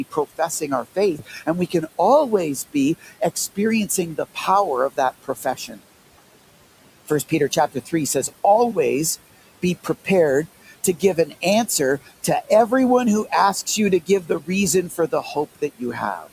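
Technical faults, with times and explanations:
Throughout, noise suppressor artifacts: the room noise, sitting about 18 dB under the speech, is pulled down by about 17 dB in the gaps and comes back up under the speech.
0.11–1.99 s, 2.73–4.37 s, 4.9–5.81 s, 7.08–7.93 s, 10.66–11.69 s (just before "to everyone who asks"), 14.06–14.48 s (right after "who asks you to") and 14.89–16.27 s, speech cut by the noise suppressor: in each span, a few tenths of a second of soft speech are misread as noise and dropped by about 12 to 17 dB. The cut parts sound swallowed or faint because the speech itself fades, not just the background.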